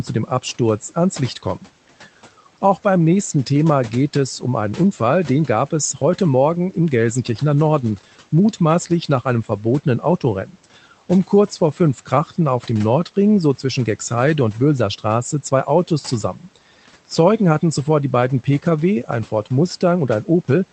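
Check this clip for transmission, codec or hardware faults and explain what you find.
One fault stands out. Room noise sits about 24 dB below the speech, and the call codec's output stops near 8 kHz, which fits Opus at a modest bitrate.

From 16.34 to 16.57 s there is speech cut by the noise suppressor. The suppressor mistook soft speech for background and lowered it by up to about 9 dB for roughly a tenth of a second, so the sound seems swallowed. A spectrogram shows the energy thinning in that stretch, and the waveform envelope dips briefly.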